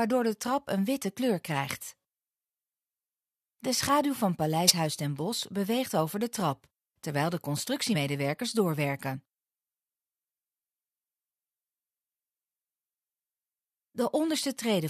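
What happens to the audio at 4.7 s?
Around 4.67 to 4.71 s there's a compressed-frames-skipped dropout: roughly 20 ms of audio just goes missing, and the sound jumps ahead by that much.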